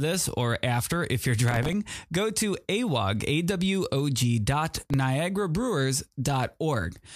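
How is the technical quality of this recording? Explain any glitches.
Two short bursts of processor overload crackle spoil the recording. The first runs from 1.48 to 1.73 s, between "or after if you're" and "go to awog". The second runs from 4.77 to 4.94 s. In each, about fifteen very short buffers of a millisecond or two missed their deadlines and replayed old audio with hard edges. The result is a gritty tearing over the speech.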